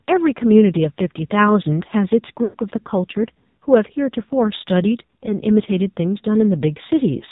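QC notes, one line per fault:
throughout: AMR narrowband mobile codec. Nothing above 4 kHz survives, so the speech sounds boxed-in and telephone-like, and the damage is heavy: voiced sounds come out buzzy and synthetic, as a vocal-tract model driven by sparse pulses replaces the real waveform. That synthetic buzz points to a low AMR-NB mode, around 5.9 kbps. A plain 4 kHz low-pass would dull the sound but leave it natural rather than buzzy.
2.44 to 2.57 s: lost AMR speech frames. The decoder lost about 100 ms of speech, which fits five missing 20 ms frames. To fill the gap it kept reusing the last good pitch and vocal-tract settings at falling gain, so the sound stretches into a held, drawn-out tone that fades toward silence before speech returns briefly weak and rough. A packet-loss gap in other codecs would drop out abruptly or repeat audio, without this sustained, decaying resynthesis.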